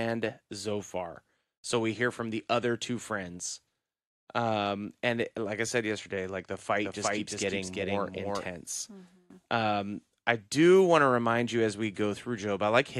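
A second copy of the speech, likely from a slower capture path or a misaligned edit, enters right after "said yesterday like the" at 6.85 s and runs until 8.45 s. This doubled audio track trails around 400 ms behind at roughly equal loudness, dry and full-band, starting and stopping abruptly.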